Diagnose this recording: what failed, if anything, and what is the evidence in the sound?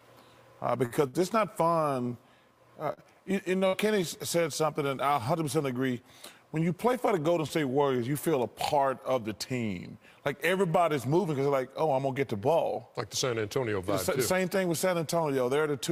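Two brief hangs come first, at 0.85 to 0.93 s and again at 1.08 to 1.16 s. Each time the sound freezes on itself for a moment, held with a faint buzzy sustain, then resumes exactly where it left off. These are short stalls from a late packet at the network stage. The jitter buffer ran dry and the receiver stretched the last audio for 51 ms and then 56 ms until the packet arrived. Nothing was skipped, but the delay grew by those amounts.

From 2.93 to 4.07 s the sound turns choppy, with pieces missing. This is repeated packet loss, also a network fault. Four separate holes open in quick succession, the longest 55 ms. The receiver papered over each by extending the preceding audio, totalling 143 ms of concealment, about 13% of that stretch. Another 60 ms simply went missing where the patching couldn't cover it.

Between 8.73 and 9.40 s the sound briefly rushes forward at about 107% speed while its pitch stays put. 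That hurried quality is a jitter buffer speed-up. The buffer had accumulated more audio than its target, and to shed the excess latency the receiver trimmed many tiny pitch-period slices in a row. Together they removed about 50 ms, which shortens the passage without any pitch shift.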